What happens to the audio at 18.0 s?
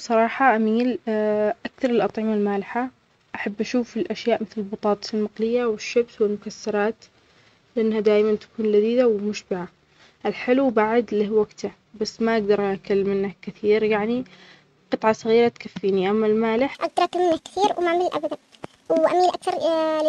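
The speech runs high and rushed: a section at the wrong speed, 1.56 times fast from 16.75 to 20.09 s, likely played against a mismatched clock.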